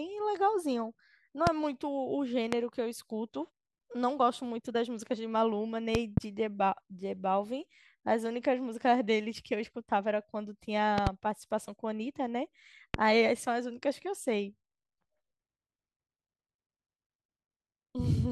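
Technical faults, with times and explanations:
1.47–1.49 s, 2.53–2.55 s, 5.95–6.20 s, 10.98–11.09 s and 12.94–12.97 s, loud pop: sharp pops jump out at roughly 20 dB above the speech, which carries on underneath. The first, second and last are single pops, and the third and fourth are pairs in quick succession. Each is likely a brief voltage step or spike, from a switch, connector, static discharge or driver glitch, that the downstream circuitry turned into a short, hard transient.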